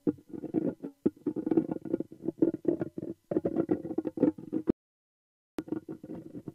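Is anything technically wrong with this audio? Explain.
Yes. There is an audio dropout to silence from 4.70 s to 5.59 s, about 0.88 s long. The sound cuts off abruptly and returns just as abruptly, and the gap between is silent with no room tone left. That points to the input signal being lost, likely a momentary disconnection, link failure or mute, while the recorder kept writing silence. Whatever sound occurred during that stretch is missing.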